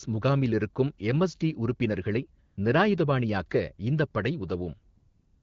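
Speech with the background twice swapped for a smooth, steady hiss: from 2.45 to 2.57 s, between "முகாமில் இருக்கும் எம்எஸ்டி உறுப்பினர்களை" and "நிராயுதபாணியாக்க இந்தப் படை", and from 4.95 s to the end. That is AMR comfort noise, where the sender stopped transmitting speech frames during these pauses and the receiver filled the gaps with synthetic noise.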